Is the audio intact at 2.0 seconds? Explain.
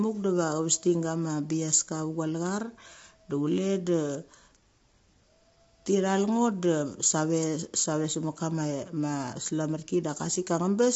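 No, at 2.0 s, as throughout the clip, there's plainly audible low-delay AAC compression, likely AAC-ELD at a low bitrate: short frames smear the harmonics, leaving rough, grainy speech with nothing above 7.7 kHz.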